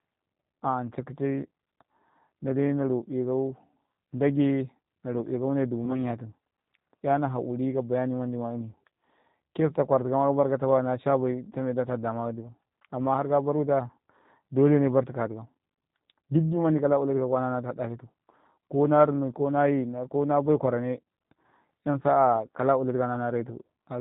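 Speech coded with the G.729 codec sounds plainly rough and synthetic, and its spectrogram shows nothing above 4 kHz, which fits an 8 kbit/s G.729A link. VoIP packet loss concealed by the speech codec occurs from 5.85 to 5.99 s. About 20 ms of audio, likely one lost packet, is filled with a fading extrapolation, and the voice stays weakened afterwards, visible as a smeared, dipping stretch in the waveform.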